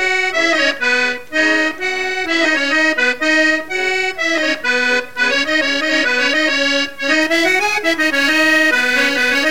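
From about 7.22 s right to the end there's a crude rate conversion: the audio gets squeezed down to a new rate by simply dropping or repeating the nearest samples, with no filtering. The error pattern fits a 48 kHz to 44.1 kHz change, and it sits roughly 25 dB under the signal. You hear it as a gritty, inharmonic fizz riding on the louder and brighter parts, with tones that don't belong to the sound itself.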